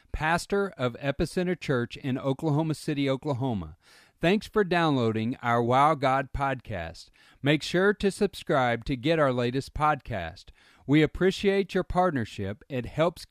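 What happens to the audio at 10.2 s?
Nothing goes wrong at 10.2 s; the speech carries on intact through that moment with no dropout, click, glitch or other fault.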